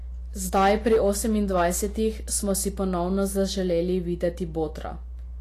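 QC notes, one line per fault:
Throughout, mains hum: a steady 60 Hz tone with some low harmonics sits under the speech at roughly 10 dB below it. Power-line current has leaked into the signal path, most plausibly through a ground loop or a nearby transformer. Because the tone never changes, it stays audible in every pause.
Throughout, Vorbis compression: the treble is hissy and grainy, and the codec damage is plainly audible. Nothing reaches above 14.2 kHz. The sound points to a low-rate encode, around 34 kbps, and this is likely Vorbis. At that rate the encoder quantises high-frequency detail so coarsely that it turns into noise of similar energy. Voiced tones sound roughened and consonant attacks are blurred.
0.55 to 1.11 s and 1.55 to 1.67 s, hard clipping: the peaks are cut flat. The first span is overdriven by 6 dB and the second by 4 dB. The signal exceeded what a stage could pass. 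The flattened waveform tops add harmonics far up the spectrum. The first overload is longer and harder than the brief second one.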